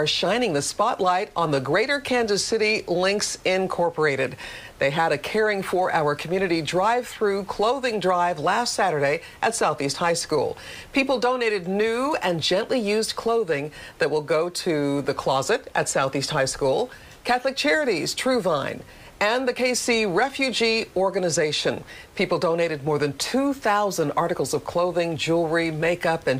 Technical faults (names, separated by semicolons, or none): none